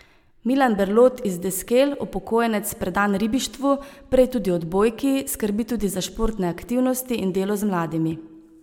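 Speech recording; no technical faults can be heard.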